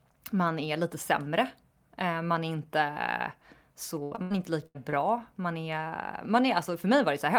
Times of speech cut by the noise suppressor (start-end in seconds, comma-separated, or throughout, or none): none